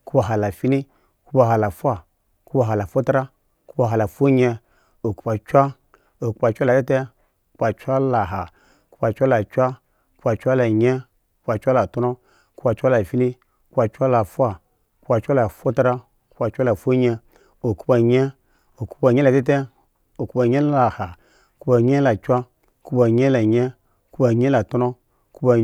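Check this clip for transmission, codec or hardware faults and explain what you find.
No faults can be heard anywhere in this speech.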